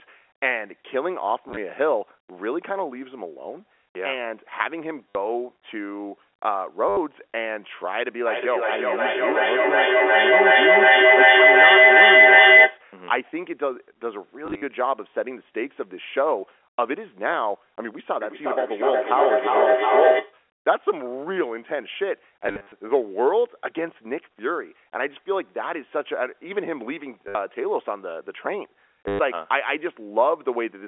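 At 1.49 s, 5.09 s and 6.89 s there is packet loss with the last packet repeated. The receiver replays the previous chunk of audio to fill each gap. The replays seldom line up with the pitch, and the runs take on a brief robotic stutter.

From 8.27 to 12.89 s a feedback howl builds near 2 kHz and peaks about 10 dB above the speech. It pulses roughly every 0.4 s, the delay of an acoustic loop between two devices in the same room.

Further repeated-packet dropouts follow at 14.46 s (100 ms lost, over 160 ms) and 22.46 s (170 ms lost, over 260 ms). These longer runs buzz at about 100 Hz, which fits 10 ms packets.

A second, weaker howl sits near 700 Hz from 18.21 to 20.41 s, peaking about 5 dB above the speech with the same slow pulsing. Short stutters recur at 27.28 s and 29.08 s.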